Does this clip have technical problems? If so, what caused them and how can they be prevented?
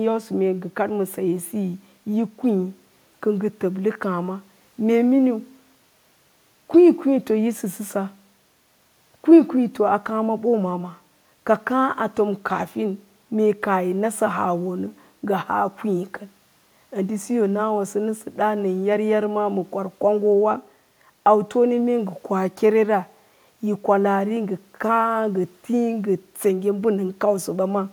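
No, nothing in this speech recording points to a technical problem, so there is no cause to trace and nothing to prevent.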